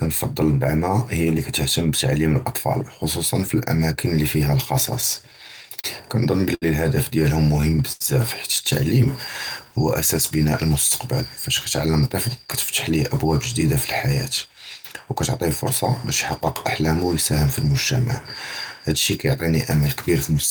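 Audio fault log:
5.01–6.64 s, repeated stalls (stutter): Packets kept reaching the receiver late, so its jitter buffer emptied eight times in this stretch. At each gap the receiver carried the preceding sound forward, adding about 163 ms of filler in total, roughly a tenth of the span, with the longest hold lasting 70 ms. No audio is lost, but the speech drags and catches repeatedly, with sounds held and faded during the longer waits.
7.92–8.02 s, short stall from a late packet: One packet arrived about 80 ms behind schedule, leaving the jitter buffer with nothing to play. The receiver extended the last sound for 80 ms until the packet turned up, then resumed exactly where it had stopped, so nothing is skipped. The result is a single sound held too long, carrying a faint buzz or slight dip in level before the speech moves on.
11.86–14.47 s, jitter buffer speed-up: The jitter buffer was holding more audio than its target. 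To cut the excess delay, the receiver repeatedly trimmed short segments one or a few pitch periods long, removing about 150 ms in all. The speech therefore plays at roughly 106% of normal speed while keeping its pitch, so this passage sounds slightly hurried and its rhythm is pushed forward.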